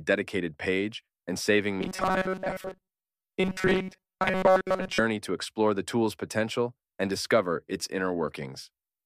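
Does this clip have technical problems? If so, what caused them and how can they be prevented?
Yes. From 1.81 s to 4.99 s the speech takes on a robotic sound from repeated short buffers. The voice becomes a stiff, metallic buzz at 188 Hz that only loosely follows the words. The likely cause is audio arriving too slowly, so the player kept repeating its last fragment of about 5.3 ms. Around 70 percent of that stretch is repeats. Larger buffers and a steadier network or processing path prevent this.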